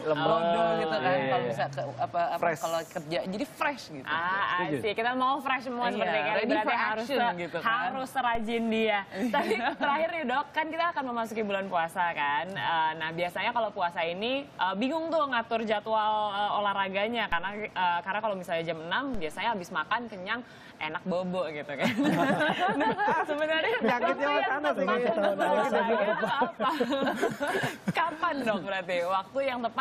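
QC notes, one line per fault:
8.35 s, 17.32 s, 19.14 s: DC step. The zero line jumps by about -28 dBFS (about -26 dBFS at 19.14 s), then slides back as a roughly 2 Hz high-pass drains it. Each jump lands as a low thump while the sound carries on untouched.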